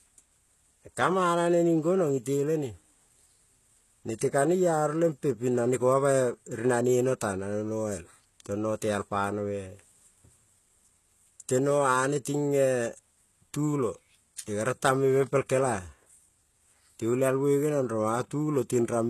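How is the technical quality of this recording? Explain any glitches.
The speech is clearly degraded by codec damage from start to finish. Sibilants sound gritty and lispy, the treble has a synthetic, metallic sheen, and nothing survives above 12.3 kHz. This is likely HE-AAC compression at a low rate, fitting roughly 16 kbps, where spectral band replication copies lower bands upward, so the rebuilt treble no longer matches the original harmonics.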